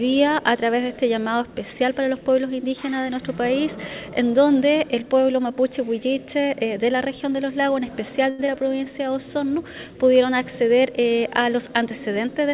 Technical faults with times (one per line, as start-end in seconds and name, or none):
8.30-8.41 short stall from a late packet
8.47-8.50 short concealed packet loss
8.52-8.78 jitter buffer slow-down
12.17-12.48 jitter buffer speed-up